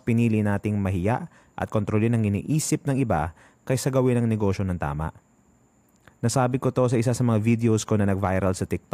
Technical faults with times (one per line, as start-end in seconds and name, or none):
none